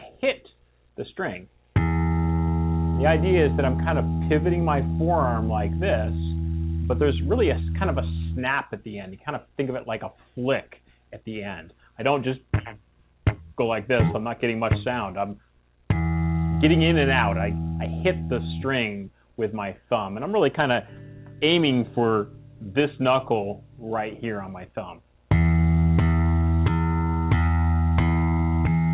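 Nothing goes wrong here, and the sound just comes through as an ordinary call would, with nothing above about 4 kHz, which fits a narrowband telephone codec such as G.711 mu-law at 64 kbps.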